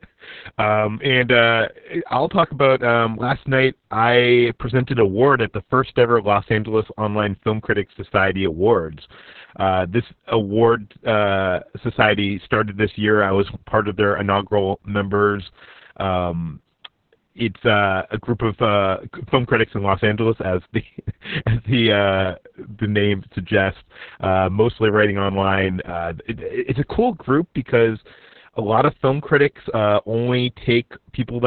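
From start to finish the speech carries heavy Opus voice compression. Everything above about 4.3 kHz is missing, leaving a narrowband, telephone-like sound, and the excitation is coded so coarsely that voices come out muffled, hoarse and faintly robotic. That fits the SILK coder running at a very low bitrate, around 6 kbps. On a spectrogram the energy stops at a flat ceiling near 4.3 kHz, with smeared, blotchy harmonics below it.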